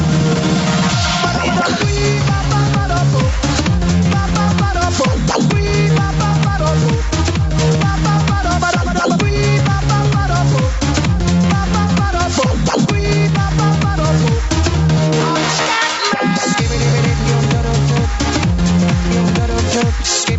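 Gain pumping runs through the whole clip. The gain swings by roughly 5 dB. The likely cause is a fast limiter pulling down gain set far too high. Levels sound squashed, with nothing above 8 kHz.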